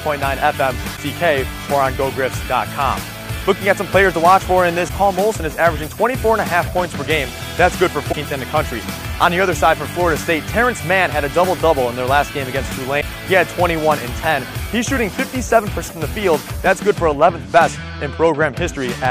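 At 0.96–0.99, 4.87–4.90, 8.11–8.14, 13.00–13.03 and 15.87–15.90 s, a roughly 30 ms glitch breaks the sound, a likely broken MP3 bit reservoir. Each shows as a brief vertical smear or gap on the spectrogram, with a discontinuity in the waveform.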